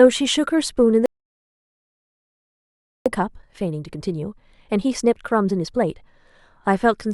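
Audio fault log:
1.06–3.06 s, playback stall: the speech just drops out mid-flow and there's dead silence for a full 2 seconds before it picks up again. That's the player starving, most likely because its buffer ran dry or the playback thread got held up, so nothing reached the output until it recovered. The gap is long and abrupt enough that you can't mistake it for a natural pause.
3.06–6.06 s, time-compressed catch-up: right after the stall, the speech comes back hurried, running at about 1.25 times normal speed for three seconds while the pitch stays where it should be. The player is clawing back the backlog by snipping out small slices and cross-fading across the joins, which is why the delivery sounds rushed rather than taking on the chipmunk effect a straight speed-up would give.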